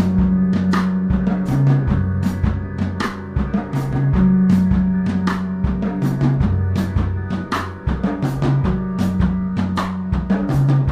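Nothing stood out as a technical problem on listening.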